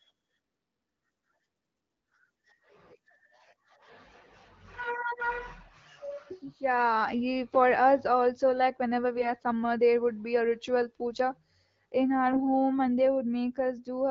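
AMR bit errors occur at 9.16 to 9.32 s, between "also like whenever" and "are summer there would", and again at 12.26 to 12.40 s. A few percent of the less protected frame bits were flipped, which misplaces the excitation pulses and skews the gain and spectral values. The speech briefly turns hoarse, scratchy and gargly. On a spectrogram, these spots appear as smeared, noisy patches with broken harmonics, while the waveform level stays roughly steady.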